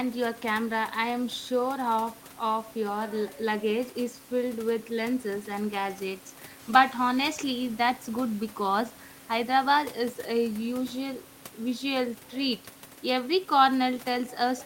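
No technical faults can be heard anywhere in this speech clip. A bed of room noise sits about 24 dB below the speech, belonging to the recording space rather than to the system.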